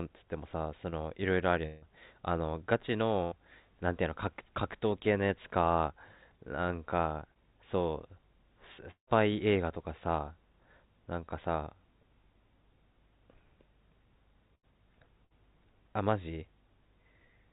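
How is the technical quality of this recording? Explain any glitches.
The speech has seven audible glitches from lost audio on a call link. The whole clip is band-limited, with nothing above 4 kHz, which points to a narrowband call codec such as G.711 at 64 kbit/s.

Short concealed packet loss occurs at 0.90–0.94 s and 7.34–7.37 s. About 20 ms of audio never arrived, and the receiver bridged the hole by extending the preceding sound before blending back. Each is a tiny smear or wobble, too brief to fade. That is what separates it from the longer events below.

A burst of packet loss occurs at 3.24–3.34 s, 14.55–14.65 s and 15.25–15.32 s, covering 60 to 80 ms each. Several consecutive packets went missing, so the receiver held the last sound and lowered it as the gap continued. The result is a short held buzz or fading hiss, after which speech resumes with that stretch gone. It is longer than a smear but ends before any silence appears.

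Two longer gaps, at 1.66–1.84 s and 8.91–9.09 s, are likely a long network dropout, each losing about 160 ms. At 1.66 s the filled-in sound decays for about 155 ms and speech returns with no true silence. At 8.91 s the concealment fades out and leaves about 90 ms of dead silence before the audio comes back. That fade into nothing is what distinguishes it from a burst.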